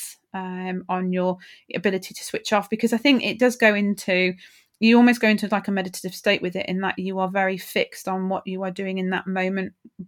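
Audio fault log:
No faults found in the speech recording; nothing to log.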